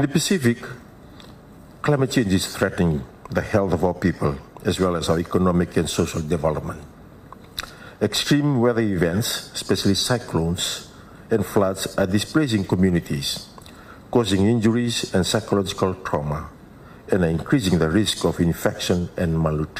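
No technical faults can be heard anywhere in the recording, which keeps a steady, uninterrupted signal throughout.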